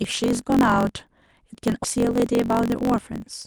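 A block size mismatch (truncated) runs through the whole of this speech recording. One stage writes longer blocks than the next reads, which fits 1024-sample blocks being cut short, and the discarded tail of each leaves a buzz at 45.9 Hz while everything plays 1.07 times fast at near-normal pitch. A skip ahead at 1.83 s jumps playback forward with no gap at all, dropping roughly 0.7 s of audio that was already queued and splicing the two sides together almost directly. From 1.96 to 3.05 s a jitter buffer speed-up follows: the receiver, holding more audio than it aims for, trims short pitch-period pieces repeatedly, running the speech at 110% without a pitch change and removing roughly 150 ms overall so it sounds hurried. The call codec's band limit, pointing to content up to about 12 kHz, can also be heard.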